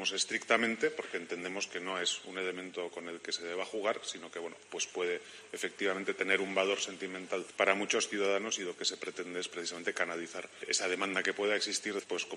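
No technical faults can be heard anywhere in the audio, and the signal stays steady and intact throughout.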